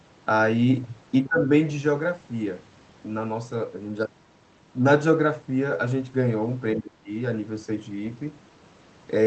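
From 1.25 to 1.51 s and again from 6.75 to 7.11 s, the speech level sags, by around 20 dB at its deepest, then recovers. This pattern is likely speech suppressed in double talk. With both ends talking at once, the echo canceller cannot separate the local talker from the loudspeaker echo, so it attenuates everything, and the near-end speech dips for roughly a third of a second each time.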